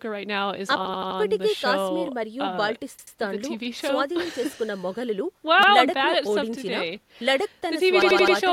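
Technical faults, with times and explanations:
0.85–1.20 s, repeated buffer: the same 85 ms slice plays four extra times back to back, a hard-edged stutter from late audio, which fits a 4096-sample buffer.
2.99–3.16 s, repeated buffer: the same 85 ms piece comes back twice more, each join abrupt, because fresh audio didn't arrive and the device replayed the last chunk.
5.63–5.72 s, repeated buffer: a single extra play of an 85 ms piece, a quick hiccup with a sharp seam where the old buffer repeats.
8.02–8.36 s, repeated buffer: another four-times stutter of one 85 ms slice; the sound just pauses its progress, with practically nothing skipped afterward.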